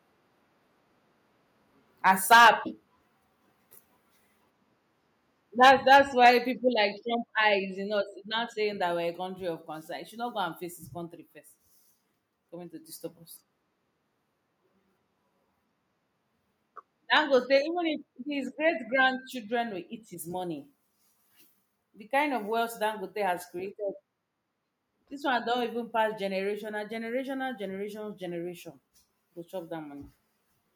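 Harsh, crackling distortion hits the loudest syllables from 2.06 to 2.5 s, about 8 dB over full scale with several percent of samples flattened. This is microphone overload, likely from input gain set too high, so peak tops are sheared off at the converter ceiling. At 2.34 s the whole sound, background included, drops about 2 dB in one step: the microphone volume is stepped down, as call software reacting to the clipping would do. The pattern repeats. Overload from 5.63 to 5.97 s, about 4 dB over, brings another 2 dB step at 5.69 s. A brief overload from 6.25 to 6.3 s, about 3 dB over, is followed by a 4 dB step at 6.69 s. A final 3 dB drop comes at 17.58 s.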